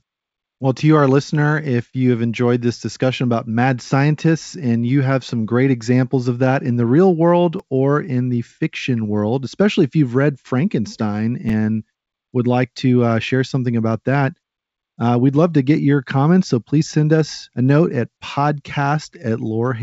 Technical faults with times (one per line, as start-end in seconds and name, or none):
7.59 repeated buffer
11.49 repeated buffer